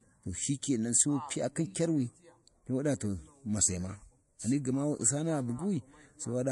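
Speech runs throughout with plainly audible damage from MP3 compression, the likely cause. Nothing is present above 11.3 kHz, so the top end sounds dull and cut off. The encoder drops treble like this when bits run short, which fits a low bitrate near 48 kbps. Weak frequency components are also discarded and return unevenly from frame to frame. That gives the sound a watery, swirling texture, and its onsets are smeared.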